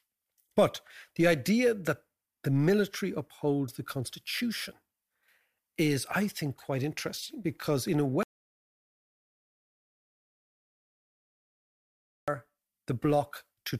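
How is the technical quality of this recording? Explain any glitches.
The recording is marred by one clear glitch. An audio dropout to silence runs from 8.23 to 12.28 s, right after "interesting because in a". The speech cuts off mid-phrase and the next four seconds are dead digital silence, with no room tone at all. The input was likely lost, through a disconnected device, a failed link or an accidental mute, while the recorder kept writing silence, so about 4.05 s of speech is gone before the sound snaps back.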